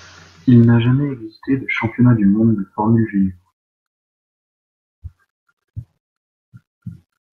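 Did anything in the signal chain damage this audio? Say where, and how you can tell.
Yes, at the playback stage: a CD scratch is producing ticks. A surface blemish wipes out more data on each revolution than the disc's error correction can rebuild, so the player has to conceal those samples by interpolating or muting them. In this speech clip there are three brief ticks between 0.64 and 1.08 s, the longest roughly half a millisecond long, just before "existé de championnat du". Their regular spacing within that short stretch points to a once-per-turn defect.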